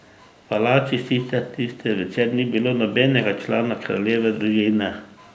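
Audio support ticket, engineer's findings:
Far-end echo canceller likely leaving residual loudspeaker pickup, returned into the call. Heard 5.13–5.35 s as an echo leak: a very faint copy of the speech trailing about 250 ms behind, well below the direct voice, within the normal 8 kHz call band.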